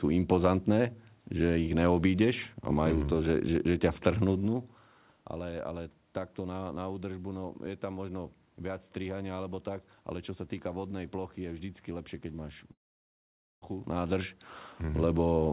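At 12.72 s the stream likely suffered a long network dropout: about 0.9 s of audio never arrived. The last sound is stretched into a brief fading buzz, then near-silence until 13.64 s, when the speech resumes with that stretch missing.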